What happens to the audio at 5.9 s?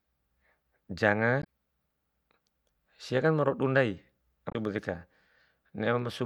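At 5.9 s the audio is intact, with no audible fault at that moment.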